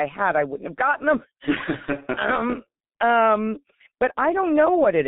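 From start to finish the speech carries heavy G.723.1 codec damage. Everything is squeezed into a narrow line band from about 150 Hz up to 3.7 kHz, so it sounds boxy and muffled. Worse, the codec chops the signal into 30 ms frames and rebuilds the voice from a coarse model it barely updates, which fits a very low-rate stream around 6 kbit/s. That's why it comes across hoarse, with consonants smeared together.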